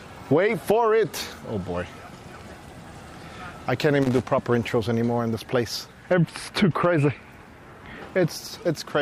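Right around 4.01 s you get a short, ragged burst of loose connector crackle that runs to about 4.22 s, so roughly a fifth of a second. It sounds like an irregular scratchy crackle riding over the sound. What's going on is a worn or dirty contact that keeps making and breaking as it shifts, chopping the signal on and off. Any DC sitting on the line turns those breaks into little pops.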